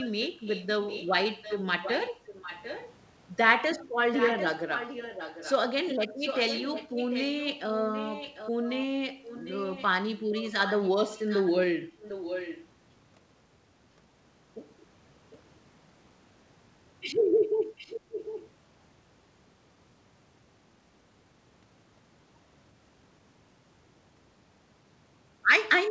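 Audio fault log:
0.00–2.94 s, 4.14–5.54 s, 6.18–12.63 s and 17.78–18.50 s, echo leak: a fainter copy of the speech trails the original by 747 ms at about 10 dB below it, likely a far-end loudspeaker whose echo canceller let part of its microphone pickup return. On a spectrogram the speech's harmonic pattern reappears shifted later and weaker, stopping at 8 kHz like the G.722 call audio. The waveform shows smaller ghost bursts filling pauses.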